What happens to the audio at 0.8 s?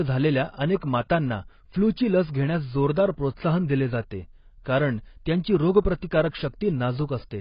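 A transform codec spread quantisation noise across its whole block, causing pre-echo from 0.76 to 0.82 s: 56 ms of hiss smearing the attack just before "मातांना फ्लूची लस घेण्यास". Beneath it, likely AAC compression at a low bitrate, fitting roughly 16 kbps, removes everything above 5.1 kHz and leaves the speech heavily dulled and smeared.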